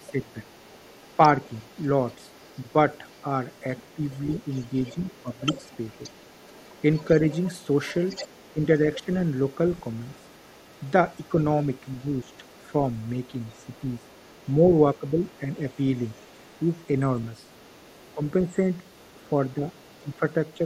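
From the start of the clip at 0.0 s to 20.57 s, a faint second voice runs underneath the speech at about 30 dB below it. This is the other side's voice leaking through. The likely cause is that the far end was playing on the local loudspeaker and the echo canceller left a residue of it in the microphone signal.

Speech suppressed in double talk appears as brief level dips at 0.0–1.19 s, 3.96–6.0 s, 8.53–9.08 s, 11.34–15.41 s, 16.65–16.8 s and 18.14–20.64 s. In each of these spans only fragments are affected. They add up to a fraction of a second up to roughly 0.7 s per span. The dips are mostly around 10 dB deep, about 5 dB near 16.7 s and about 15 dB in the final span. The likely cause is the canceller treating overlapping talk as echo and attenuating the near talker along with it.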